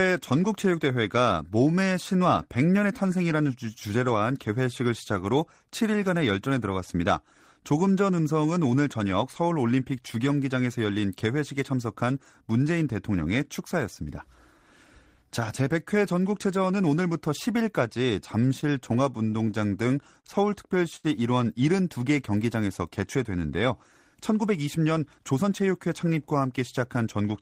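From 18.48 to 20.27 s, late packets repeatedly emptied the jitter buffer, causing repeated stalls (stutter): eleven short gaps, the longest 40 ms, filled by continuing the previous sound, so the speech drags and stutters. At 20.96 s one late packet stalled playback again, a short stall from a late packet: the last sound is held for 74 ms before resuming. From 24.14 to 25.45 s, excess buffered audio triggered a jitter buffer speed-up, trimming about a tenth of a second of pitch periods, so the speech runs 7% faster at unchanged pitch and sounds hurried.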